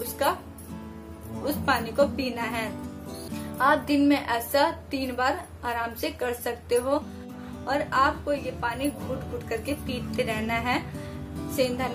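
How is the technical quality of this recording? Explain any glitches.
There is one glitch, a CD skip at 3.28 s. A tick and a mute of a few milliseconds are followed by the sound resuming from a different point. A knock or disc flaw made the laser jump to another turn of the spiral. Unlike a plain dropout, the audio does not continue from where it stopped.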